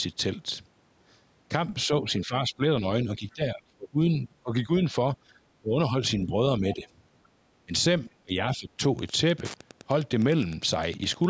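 From 1.86 to 6.87 s the speech keeps dipping by up to about 20 dB, then again at 7.66 to 7.73 s and 8.23 to 8.8 s. That's likely speech suppressed in double talk, with the echo canceller ducking the talker while the far end also spoke. Between 7.24 and 7.28 s there's a faint scrap of the other side's voice leaking through, very quiet, around 40 dB below the speech. It's likely the canceller missing some of the loudspeaker echo. From 8.93 s to the end, Wi-Fi interference sets in: a steady tick every 102.4 ms, roughly ten a second, sitting about 20 dB under the signal.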